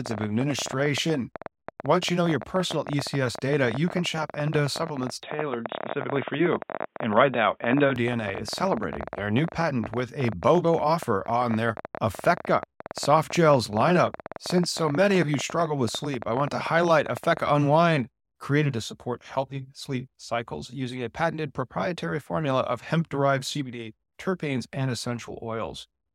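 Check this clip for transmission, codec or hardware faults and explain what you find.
Two faults are audible, and they overlap between 5.23 and 7.96 s.

A train of clicks runs from 0.06 to 17.5 s. Around 15 similar clicks per second arrive at an uneven pace, roughly 300 in total, peaking well above the speech. The likely cause is nearby interference or a struggling interface. Unlike codec crackle, the clicks keep the same shape and continue through pauses.

From 5.23 to 7.96 s, the input switched to a poorer device, likely another microphone or a headset profile. Nothing passes above 3.8 kHz, the level shifts by a few dB, and a faint new noise floor appears. There is no gap at either switch. Unlike a plain low-pass filter, tone, level and noise all change together, then snap back.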